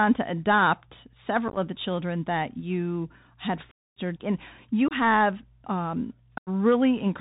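Throughout, the speech passes through the Bluetooth CVSD headset codec. Its one-bit adaptive delta stream removes everything above 4 kHz, roughens sibilants and leaves a granular hiss underneath.

Unconcealed Bluetooth headset packet loss cuts abrupt holes where packets went missing and silence or an idle pattern replaced them. These fall at 1.48–1.58 s as scattered chops, at 3.71–3.98 s as a quarter-second gap, and at 4.88–4.93 s and 6.38–6.49 s.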